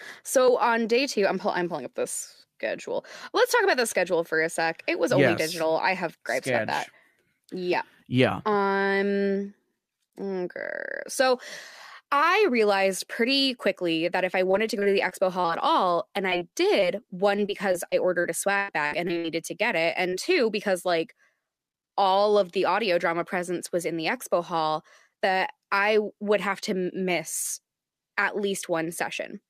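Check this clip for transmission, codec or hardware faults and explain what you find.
Packet loss shows up in two forms, clustered in the middle of the clip.

Repeated packet loss (robotic sound) runs from 14.51 to 15.50 s, with six gaps totalling about 140 ms, and again from 17.36 to 19.26 s, with ten gaps totalling about 360 ms, ending just before "to get it". Each time a packet drops, the decoder stretches the previous sound to cover it, and the next drop lands soon after. The result is choppy speech with pieces missing. The second stretch is worse: one hole runs 102 ms, and concealment covers about a fifth of that span.

Short concealed packet loss hits at 16.30–16.34 s right after "at all and", then at 16.50–16.54, 16.80–16.84 and 20.10–20.14 s, and finally at 26.60–26.64 s between "that I would have" and "to miss at". Each time roughly 20 ms goes missing and gets patched from the preceding sound, leaving a quick smear or wobble.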